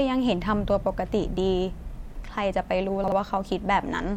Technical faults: chunks out of order

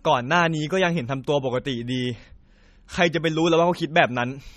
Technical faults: MP3 compression

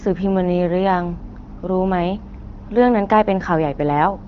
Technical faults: none

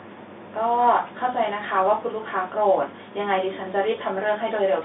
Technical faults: none

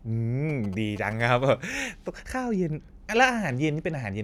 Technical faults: GSM signalling bursts

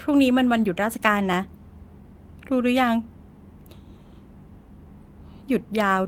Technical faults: none

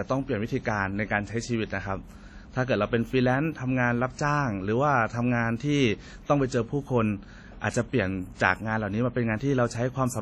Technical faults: WMA compression

